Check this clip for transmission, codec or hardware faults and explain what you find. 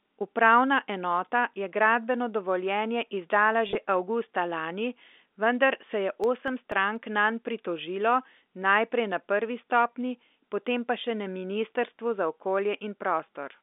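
Two faults are audible, sitting on top of a telephone-band line of roughly 250 Hz to 3.6 kHz.

From 3.67 to 3.75 s, between "je gradbeno dovoljenje izdala" and "avgusta lani vendar se", there's packet loss with pitch repetition. About 50 ms went missing across 80 ms, and the receiver re-played the last pitch period to fill each hole. Runs are at most 20 ms, so it comes across as a brief buzzy, held catch.

From 6.24 to 6.96 s, between "lani vendar se je" and "nanj pritožilo", you get CD scratch ticks. The player couldn't rebuild the damaged data on each disc turn and patched it, leaving four tiny clicks, the longest only about 1.5 ms.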